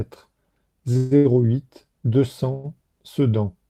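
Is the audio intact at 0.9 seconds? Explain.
No. From 0.93 to 0.97 s there is a short stall from a late packet: the jitter buffer ran dry, so about 16 ms of the preceding sound is held, showing as smeared, unchanging spectral bands. A call audio freeze follows from 0.97 to 1.13 s, likely from packets held up in transit. The last sound continues as a fading buzz for 140 ms, a flat, decaying band with no silent gap, before "huit deux" resumes with nothing lost.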